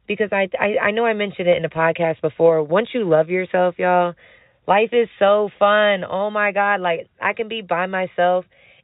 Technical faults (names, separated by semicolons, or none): none